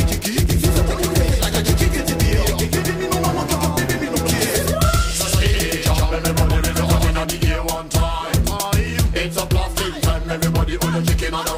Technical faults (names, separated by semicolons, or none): doubled audio track